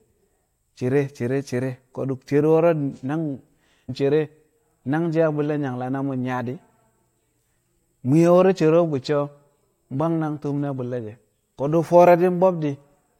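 A stream segment skipped in this speech recording, likely because one chunk of the segmented stream failed to load and the player moved straight on to the next one. At 3.88 s the speech jumps forward abruptly, with a short blip at the join. A stretch of the programme, a second or more, never arrives, so the talk resumes further along than it should, with no fade or pause to cover the gap.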